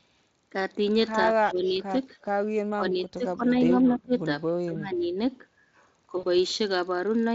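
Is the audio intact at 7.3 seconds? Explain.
Yes, the audio is intact at 7.3 seconds, with no fault at that moment.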